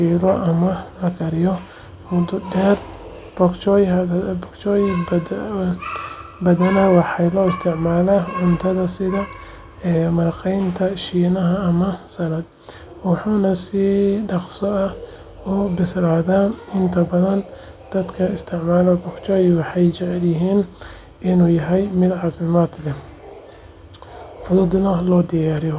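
Nothing goes wrong anywhere in this speech recording; there's simply no technical fault to point to from beginning to end.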